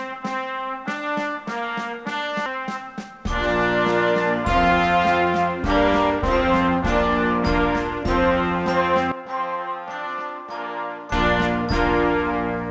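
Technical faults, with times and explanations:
2.46 to 2.56 s, skip ahead: playback jumps forward here. Roughly 0.7 s of audio is simply missing, and the sound on either side is butted together with no gap filled in. This is what a jitter buffer does when it overflows and throws away a queued stretch to catch up. The delay drops by about the same amount at once. So the ear hears an abrupt splice rather than a pause.
9.12 to 11.12 s, input switched to a poorer device: the sound abruptly turns duller and quieter, by about 10 dB. Nothing is heard above 6.5 kHz, narrower than the rest of the call, which reaches 8 kHz through its G.722 path. A new noise floor appears, about 35 dB below the signal. There is no silence at the change. The likely cause is the system swapping its input to a weaker microphone or a headset call profile.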